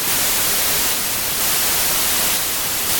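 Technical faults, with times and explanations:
Throughout, wrong sample width: packed 24-bit data read as 32-bit samples mismatches bytes, burying the speech in loud noise and playing it 1.33 times fast, pitched up.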